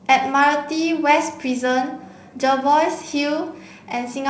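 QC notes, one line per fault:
No faults found in the speech. The G.722 wideband telephone coding at 56 kbit/s carries the speech up to about 7 kHz, with a light hiss in the upper band and slightly more noise in the lower band at this rate.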